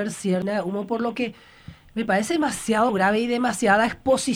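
At 0.42 s, and again from 2.88 to 2.90 s, the sound is broken by short bursts of damaged data in a compressed stream. Part of the encoded bitstream arrived wrong, so the decoder could not read those frames correctly, lost sync and had to search for the next valid frame header. Each event is heard as a brief chirp or blip, the first about 10 ms long and the second about 20 ms.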